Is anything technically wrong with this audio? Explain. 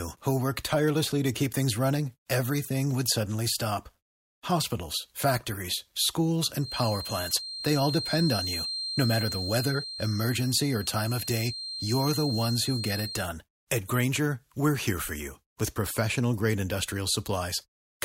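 Yes. Just after "factories schools", from 6.58 to 13.30 s, there's a feedback whistle: a thin 4.2 kHz tone at one pitch, slowly swelling and fading about 10 dB under the speech, likely a mic-speaker loop sitting right at feedback.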